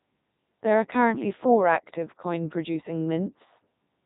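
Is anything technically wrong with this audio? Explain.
Yes. Throughout the clip the speech sounds robotic and buzzy, with nothing above about 3.8 kHz. That is the signature of the Codec 2 vocoder, here at a setting consistent with its top 3.2 kbit/s mode. Rather than keeping the waveform, it transmits only pitch, voicing, energy and a coarse spectral envelope, and the decoder rebuilds the sound from sine waves. The damage is heavy.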